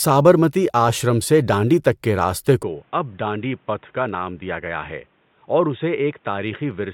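At 2.63 s the recording system likely switched its input to a poorer device, such as a different microphone or a headset's call profile. From that moment to the end of the speech, nothing above 3.8 kHz comes through, so the voice turns dull and boxy. The level drops by about 5 dB, and a faint new background noise appears well below the speech. The change is instant, with no silence at the switch.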